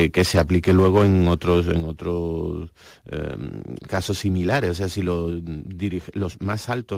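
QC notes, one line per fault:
0.35–0.37 s, lost packet rebuilt from error correction: one 20 ms packet was lost, and the decoder played the lower-bitrate copy carried in the next packet instead. There is no gap, but that moment of speech sounds briefly rougher and noisier.
1.80 s, microphone volume stepped down: the call software likely judged the microphone too loud and lowered its input volume in a single step. Speech and background noise drop together by about 7 dB at once and stay at the lower level.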